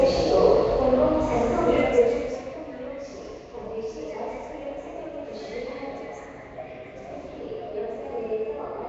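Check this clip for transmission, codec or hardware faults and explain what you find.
One codec fault runs through the whole clip.

Nellymoser compression, throughout the clip: the sound has a plainly audible rough, hissy halo and a smeared, underwater quality, with nothing above 7.8 kHz. This likely comes from Nellymoser Asao coding, which fits about 32 kbps. It spends a fixed two bits per sample on 256-sample blocks and fills starved bands with noise.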